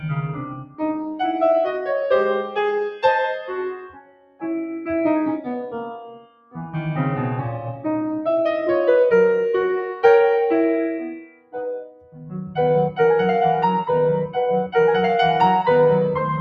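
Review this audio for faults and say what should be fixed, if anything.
A noise suppressor built for speech has been left running on this music for its whole length. It treats sustained tones, ambience and reverb as noise and keeps turning them down, so the level swings by around 10 dB as the music changes. Attacks pass, but held notes and tails thin out and pump. Unlike a compressor, it follows how steady the sound is, not how loud, which is why sustains sink even when quiet.

In four places the suppressor cuts the sound much harder, judging it to be noise outright: 0.33–1.21 s (down about 17 dB), 3.72–4.44 s (about 20 dB), 5.96–6.74 s (about 16 dB) and 11.09–12.58 s (about 20 dB, lasting roughly 1.5 s). In each of the first three, most of the span is pulled down, around 0.7 s. A dropout would remove everything at once, but here the sustained and decaying parts sink while sudden onsets still come through.

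To prevent both faults, bypass speech noise suppression for music, or switch the processing chain into a music or original-sound mode before recording.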